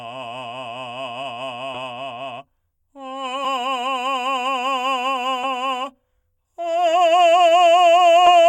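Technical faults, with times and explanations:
1.74–1.78 s, 3.44 s, 5.43 s and 8.26–8.30 s, compressed frames skipped: the music jumps forward by about 30, 70, 20 and 100 ms. The decoder never played those stretches, which were either missing or rejected as damaged. The jump sizes fit whole 10 ms frames. No silence or repeated material fills the gap.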